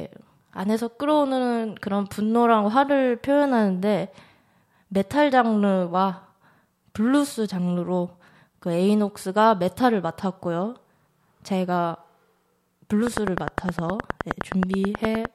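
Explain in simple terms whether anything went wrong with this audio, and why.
Near the end, from 13.07 to 15.26 s, a steady ticking of about twenty loud clicks, nearly ten per second, sits over the speech: a train of clicks, likely from electrical interference.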